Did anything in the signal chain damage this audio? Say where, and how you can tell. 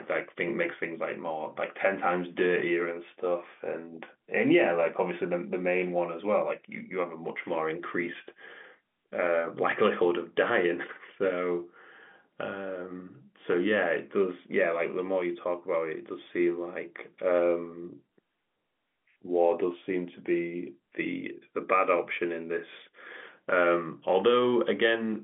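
No, nothing in the chain damaged this audio.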